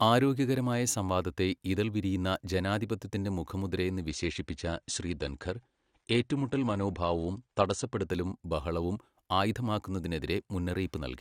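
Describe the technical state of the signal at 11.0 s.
At 11.0 s the speech signal is intact, with no audible fault at that moment.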